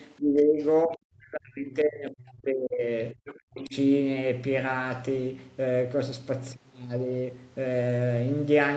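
This speech clip has the talker's level repeatedly pulled down while a second, fainter voice breaks through. The talker dips by about 15 dB from 0.17 to 0.64 s, then falls much further, up to about 35 dB, across a two-second stretch from 0.88 to 2.91 s, and again by about 40 dB from 3.12 to 3.76 s. In the deepest spans the sound is gutted or cut out in pieces. This is speech suppressed in double talk, likely because both sides spoke at once and the echo canceller, unable to tell the local talker from loudspeaker echo, attenuated everything together. Within those same stretches the other side's voice is leaking through in short scraps at 0.61 to 0.66 s and 0.92 to 0.96 s, both very faint at about 35 dB below the talker, and more audibly at 3.26 to 3.35 s at about 20 dB below. The cause is likely residual loudspeaker echo that the canceller failed to remove from the microphone. The whole clip is band-limited to 8 kHz by the call path's Opus coding.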